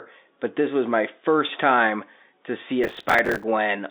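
Gritty crackle tears through the speech from 2.84 to 3.44 s, after "first time to see". This is processor overload crackle: dozens of missed deadlines, fitting buffers of about 5 ms, each replaying stale audio.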